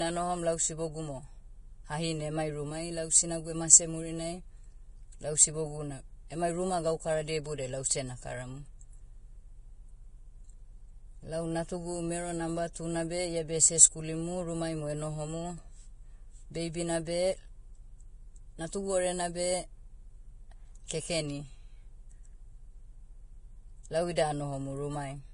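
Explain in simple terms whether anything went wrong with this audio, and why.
The speech was squeezed hard to make the file small, most likely by Vorbis compression set to a low quality. The codec throws away everything above 10.6 kHz and describes the remaining high frequencies only roughly, so fine detail turns into noise. Throughout all of the clip, the speech sounds dull at the top yet hissy and grainy, and sharp consonants lose their crispness.

At 24.16 s there is a pre-echo. The codec handles sound in short blocks and spreads its errors evenly across each one. When a sudden loud onset lands late in a block, that noise also fills the quiet moment just before it. Here a short hiss of about 13 ms sneaks in ahead of the sound, making its start seem blurred and softened.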